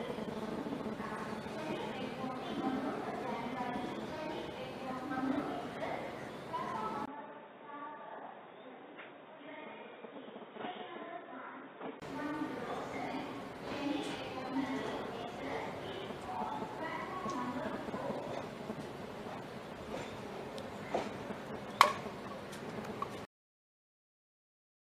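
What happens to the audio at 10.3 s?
At 10.3 s the sound is in the middle of a stretch from 7.06 to 12.02 s where the input has likely switched to a poorer device. Everything above 3.8 kHz is missing, so the audio turns dull and boxy and drops about 10 dB. A new noise floor sits well below it. A spectrogram shows a flat ceiling at 3.8 kHz and a 20 ms gap at the switch.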